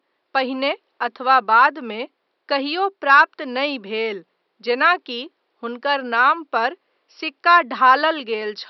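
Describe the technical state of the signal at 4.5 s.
At 4.5 s the speech signal is intact, with only the room's own background noise sitting far beneath it, about 54 dB down.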